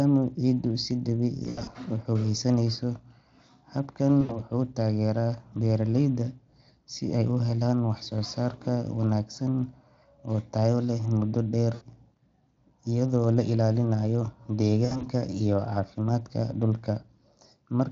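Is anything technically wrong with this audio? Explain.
Yes. At 1.43–1.70 s, 4.21–4.42 s, 11.73–11.84 s and 14.85–15.04 s (just before "iyo caafimaadka"), the speech briefly smears into a buzzy, fading tone and stays weak for a moment afterwards. This is VoIP packet loss concealed by the speech codec. About 80 ms of audio was lost at a time, or 160 ms and 100 ms spread in short runs in the first and last events. The decoder filled each gap by extending its last pitch and spectral shape at falling gain. Because each frame builds on the previous one, recovery lags after the packets return.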